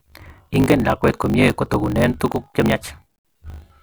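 Right from the start and for the whole clip, the speech has a block size mismatch (truncated) fault. One stage hands over blocks that look like 1024 samples, but the next stage reads less than that, so the tail of every block gets dropped. You hear it as a steady 50 Hz buzz where the chopped block edges meet. The speech runs about 1.16 times too fast, yet the timbre stays.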